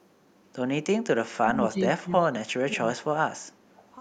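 From 1.41 to 3.15 s the speech keeps dipping and breaking up in pieces, about a second and a half of it in total, with the deepest drops around 25 dB. That's speech suppressed in double talk, likely the echo canceller hearing both ends talking at once, failing to tell its own talker from the loudspeaker echo, and ducking everything together.

Inside that stretch, around 1.76 to 1.84 s, a faint delayed copy of the voice slips through, roughly 25 dB under the speech and trailing it by 322 ms. It shows up again from 3.74 to 3.91 s, same 322 ms delay and a bit quieter, something like 30 dB down. That's echo leak, likely one end running on a loudspeaker with its canceller not fully scrubbing what its mic picked up, so short scraps got sent back.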